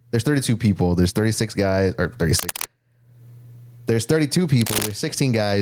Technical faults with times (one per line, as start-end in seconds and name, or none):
0.00-5.62 gain pumping